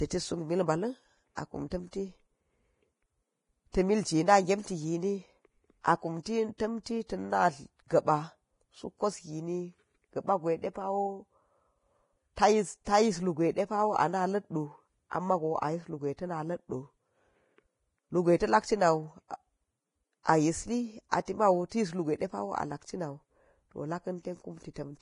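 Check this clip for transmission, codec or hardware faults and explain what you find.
Two codec faults are present: heavy lossy compression across the whole speech clip, and three pre-echo events in the first seven seconds.

Vorbis compression runs throughout. Nothing is audible above 10.5 kHz, and the upper band sounds hissy and granular, with roughened tonal detail and softened consonant onsets. This is likely low-quality Vorbis coding. The encoder lowered its cut-off and quantised the remaining treble residue so coarsely that fine detail turned into noise of similar energy. The heavy damage fits a bitrate in the region of 28 kbps.

Pre-echo occurs at 1.35–1.37 s, between "suk mil ba̱la̱n" and "akum tanti", at 3.72–3.74 s, and at 6.58–6.60 s, just before "tamti tin". Each event is a short hiss of about 21–22 ms ahead of a sharp onset, and the onset itself sounds smeared. The transform codec spread quantisation noise across a whole block, so noise sized for the loud attack also filled the quiet moment before it.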